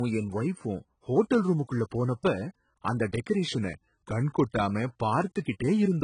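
Throughout the speech, nothing is present above about 10.5 kHz, and the remaining band sounds dull and smeared, with a fizzy, warbling edge on sibilants. This is most likely AAC compression, and the heavy damage points to AAC-LC at a very low bitrate, around 16 kbps. A plain low-pass filter would only darken the top. Here the codec is also starving bands inside the passband, so the texture churns rather than simply rolling off.

From 3.48 s to 4.69 s, the speech suddenly slows by about 5.4% and drops roughly 96 cents, close to a semitone. For those 1.2 seconds it holds steady at the lower rate, then snaps back. This is a drift correction step, likely from clock-matching software stepping the playback rate to rebalance its buffer. Unlike wow or flutter, which waver continuously, this shift has abrupt edges and stays fixed in between.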